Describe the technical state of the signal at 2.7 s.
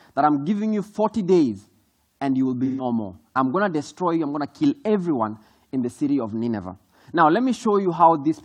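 A smeared, noisy patch runs from 2.65 to 2.85 s: AAC frame loss with concealment, the decoder rebuilding roughly three missing frames from the last good spectrum.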